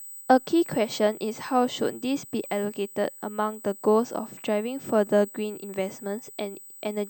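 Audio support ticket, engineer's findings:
USB whine, whole clip: bus drawing power in 125 µs microframes, leaking through supply/ground. Fixed-pitch 8 kHz whine, strongest at 16 kHz, about 20 dB under speech.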